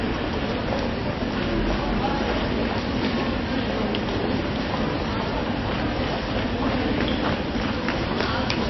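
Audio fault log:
Throughout: MP3 compression. Nothing comes through above 5.8 kHz, so the top end is chopped off flat and everything sounds dull and boxed-in. On top of that there's a clearly audible watery, swirly texture, where quieter detail flickers in and out as the encoder drops weak frequency content frame by frame. Sharp onsets come out smeared. That's likely a starved MP3 encode, and the damage points to a very low bitrate, somewhere around 24 kbps.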